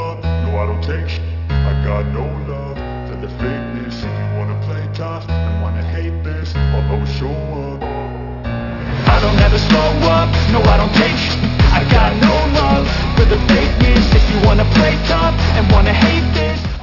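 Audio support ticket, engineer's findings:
Aliasing throughout: downsampling to 12 kHz without anti-alias filtering. Content above 6 kHz folds back as gritty, metallic tones, fairly strong against the signal, spectrum packed to the band edge.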